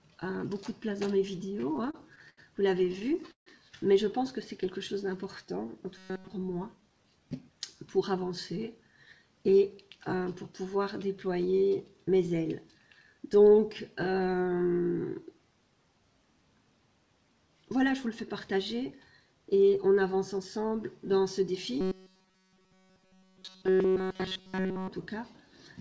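Call audio whose band stops at 8 kHz, consistent with G.722 at 64 kbps. Repeated stalls (stutter) appear at 1.56–2.39 s and 2.85–3.48 s, where the sound hangs and drags, with waits up to 74 ms and 149 ms, but nothing is lost, unlike dropouts. A robotic sound, likely from repeated short buffers, replaces the audio at 5.98–6.32 s and 21.81–24.88 s with a rigid 188 Hz buzz, a fixed pitch that stutter lacks. Jitter buffer speed-up quickens the audio at 17.79–19.21 s (104%) and hurries it at 20.38–20.73 s (109%), trimming around 70 ms and 40 ms while the pitch stays unchanged.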